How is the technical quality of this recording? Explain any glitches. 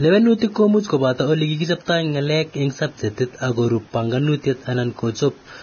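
Poor: heavy codec damage runs through the whole speech clip. Vorbis compression, throughout: nothing above 6.5 kHz survives, and coarsely quantised treble turns to grainy hiss, likely from a very low bitrate near 18 kbps.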